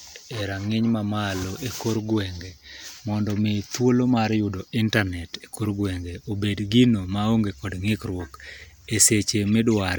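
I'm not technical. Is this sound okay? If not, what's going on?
Yes, it sounds fine.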